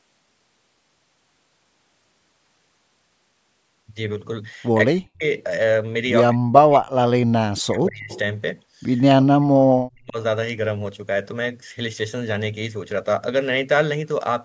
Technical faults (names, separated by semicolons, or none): speech suppressed in double talk; echo leak